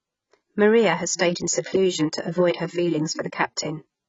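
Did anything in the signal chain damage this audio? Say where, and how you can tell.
Yes. At the codec stage, the speech is dull and smeared throughout, with a warbling, fizzy texture on sibilants. A spectrogram shows a hard ceiling near 7.5 kHz. That points to heavy, likely AAC compression at a low bitrate, around 16 kbps.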